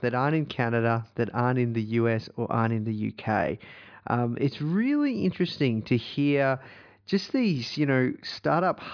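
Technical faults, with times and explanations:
No technical faults can be heard in this recording.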